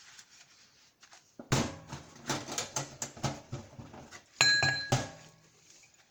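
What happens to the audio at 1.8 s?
Right there and across the whole clip you hear a grainy, noise-filled top end, likely Bluetooth LC3 compression filling thinned highs with noise, consistent with 10 ms frames at around 48 kbps.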